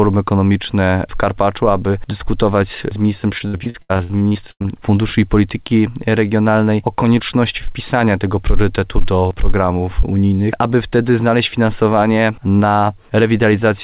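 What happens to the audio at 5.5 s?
Nothing goes wrong at 5.5 s: the audio runs on intact through that moment, carrying only the steady narrowband character of the call path, with nothing above about 4 kHz, which fits a G.711 telephone-grade codec.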